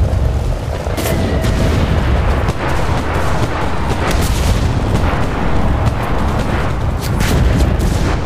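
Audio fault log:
3.72–4.72 s, drift correction step: playback runs 5.8% fast for about one second, raising pitch by roughly 98 cents, close to a semitone, then returns at 4.72 s. Likely a clock-matching resampler abruptly changing its rate to rebalance its buffer.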